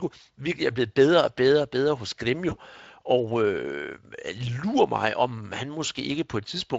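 VoIP packet loss concealed by the speech codec at 2.49 to 2.57 s: one roughly 20 ms frame vanished, so the decoder extrapolated and faded it, leaving a brief buzzy or noisy smear.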